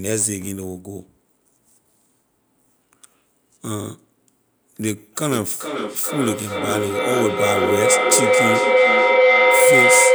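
A feedback howl takes over this speech recording: two devices in the same room are joined to the call, and the path from microphone to loudspeaker and back gains level on each pass. From 5.31 s to the end of the clip, repeats swell instead of decaying and narrow to a tone near 500 Hz, pulsing about every 400 ms and peaking about 7 dB above the speech.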